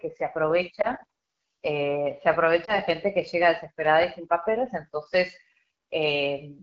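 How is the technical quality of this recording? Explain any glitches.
The recording is noticeably degraded, with a low-rate phone codec throughout and two brief dropouts.

The whole clip carries the sound of the AMR wideband (HD Voice) codec at a low setting, which fits its 8.85 kbit/s mode. The codec rebuilds speech below 6.4 kHz from a pulse-excited model of the vocal tract and fills the top band up to 7 kHz with shaped noise. At this rate the model is coarse, so the voice comes out rough and raspy. The roughness is steady across the clip and the top end has a hissy, synthetic quality. That separates it from clipping, which comes and goes with level.

Lost AMR speech frames cause short glitches at 0.81 to 0.89 s and 2.65 to 2.79 s. Each one is consistent with a single lost 20 ms frame. When a frame failed its checksum, the decoder repeated the last good pitch and vocal tract settings at reduced gain. 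The result is a brief dip or warble rather than a click or a hard gap, and the voice returns weak or rough for a moment. A network packet loss with silence substitution would instead cut out abruptly.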